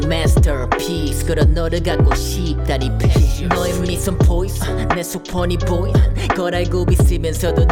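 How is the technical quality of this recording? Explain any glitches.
No glitches: the signal runs unbroken with no dropouts, clicks or level disturbances anywhere in the recording.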